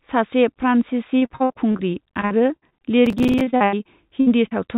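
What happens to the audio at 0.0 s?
Nothing goes wrong at 0.0 s: the speech starts intact, carried over a call path that sounds like G.711 mu-law and leaves nothing above 4 kHz.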